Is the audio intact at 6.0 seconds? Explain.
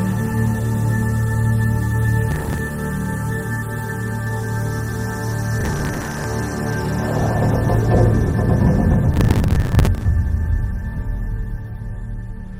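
No. Processor overload crackle runs from 5.61 to 6.24 s. Dozens of short buffers, roughly 10 ms each, miss their deadline and replay stale audio, causing gritty tearing.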